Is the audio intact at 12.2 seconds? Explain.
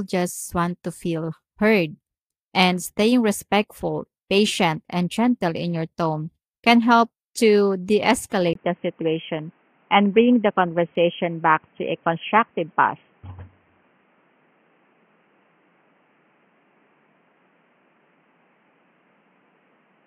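No. From 8.53 s, right after "can help to de", through the end, the recording shows an input switched to a poorer device, likely a change of microphone or headset profile. Nothing passes above 3.3 kHz, so the sound turns dull and boxy while loudness stays about the same. A spectrogram shows the upper band cut flat at 3.3 kHz and a faint new noise floor roughly 40 dB down, and the waveform shows a brief 20 ms gap at the switch.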